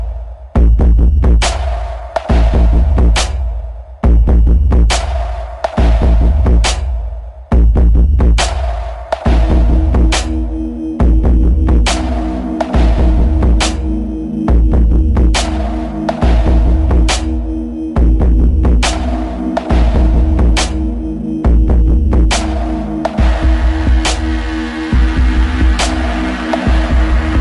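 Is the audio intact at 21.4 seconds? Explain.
No. At 21.4 seconds, as across the whole clip, there is a wrong sample rate fault. The samples play back without conversion at about 0.73 of their proper speed, so everything sounds slow and about 5.6 semitones low. This fits 44.1 kHz material played at 32 kHz.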